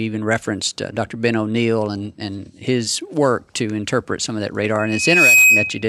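After "interpret some of that", the microphone–loudspeaker loop passes unity gain at 2.5 kHz, so from 4.79 to 5.88 s a loudspeaker feedback squeal swells over about half a second to roughly 10 dB above the speech.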